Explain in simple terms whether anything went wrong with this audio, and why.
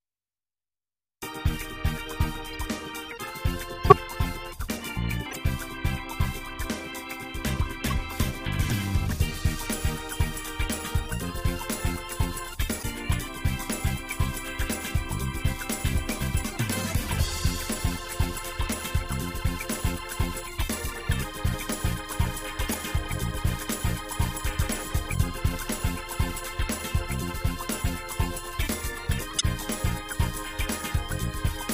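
Short chirps and bursts of noise interrupt the sound at 2.53, 3.84, 5.31, 7.85, 12.79, 22.68, 24.90 and 29.29 seconds. This is a corrupt frame decoded: damaged compressed data was played anyway. The burst at 3.84 is loudest.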